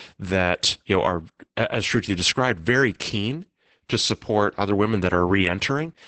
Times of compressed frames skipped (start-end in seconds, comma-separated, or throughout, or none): none